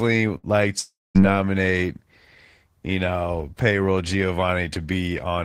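A burst of packet loss at 0.37 to 0.46 s leaves a brief fading fill of about 60 ms, and roughly 60 ms of speech is skipped. A long network dropout is the likely cause from 0.79 to 1.18 s: a stretched, fading fill gives way to about 220 ms of silence, and around 360 ms of speech never returns.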